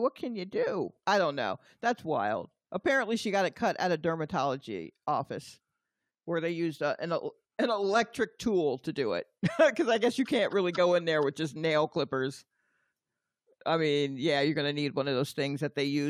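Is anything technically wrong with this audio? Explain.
No, nothing technically wrong can be heard in this recording.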